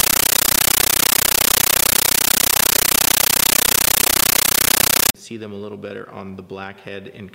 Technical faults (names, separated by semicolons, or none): compressed stream played as audio